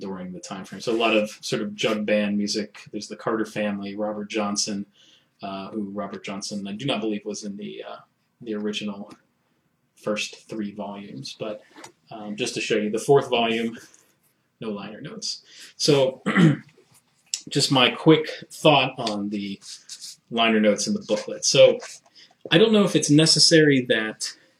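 Nothing here calls for comment, since there's no fault anywhere in the audio to point to.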